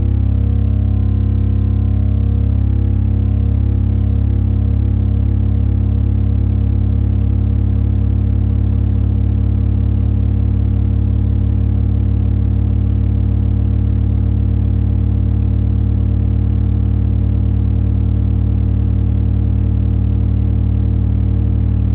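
Nothing stood out on listening; the audio has the narrow, telephone-like bandwidth of a G.711 call path, with nothing above about 4 kHz.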